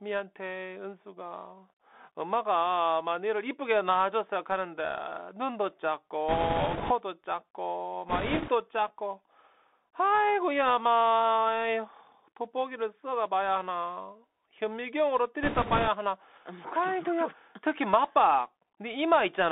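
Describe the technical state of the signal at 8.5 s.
At 8.5 s the signal is at the tail of a burst of bit errors on a Bluetooth voice link running from 8.09 to 8.51 s. Flipped bits at a high rate, several percent, add a rushing, crackly noise without hard clicks, since each CVSD bit carries little weight. Underneath, the Bluetooth CVSD headset codec limits the band to roughly 250 Hz to 3.6 kHz, which fits a 64 kbps delta-modulated stream, with granular hiss and scratchy sibilants.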